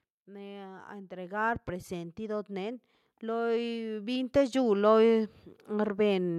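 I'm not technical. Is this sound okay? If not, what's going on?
No. From about 0.12 s to 6.34 s the whole recording slowly gets louder, and the background noise swells right along with the speech, so the room seems to creep closer over the clip. This is automatic gain rising: the recording system decided the incoming sound was too quiet and kept turning its own volume up bit by bit, which lifts everything it hears, not just the person talking.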